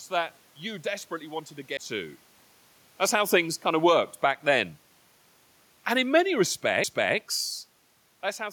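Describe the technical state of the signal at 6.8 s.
A CD skip at 6.84 s: the laser jumped to another turn of the disc's spiral, so after a brief mute of a couple of milliseconds, the speech resumes from a different point.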